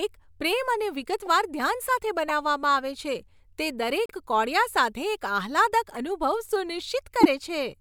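A speech recording whose compressed stream carries corrupted frames that the decoder played anyway: corrupt frame decoded. Flipped bits misread gains and codes, throwing energy into wrong frequencies for a frame or a few, heard as brief chirps and noise blips at 1.26–1.28 s (after "પ્રેમ અને"), 2.29–2.31 s (after "ધ્યાન સાથે"), 4.06–4.11 s (after "છે જે"), 5.95–5.98 s and 7.20–7.26 s. Most are faint, the second is clearer, and the last is loud.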